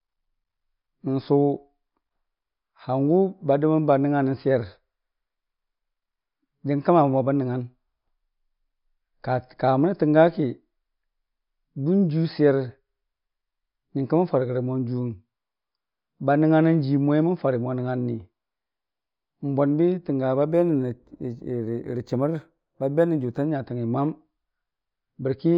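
From 20.47 s to 23.46 s, sibilants pick up a faint metallic shimmer while the top of the band sounds dulled. This is imaging from linear upsampling. The rate was raised by joining samples with straight lines, which filters poorly, so a mirrored copy of the spectrum survives between roughly 5.5 kHz and 11 kHz, very faint, around 45 dB below the speech. That fits audio near 11 kHz converted up to 48 kHz.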